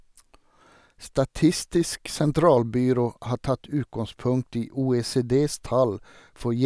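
Speech recording with no audible technical faults anywhere in the clip.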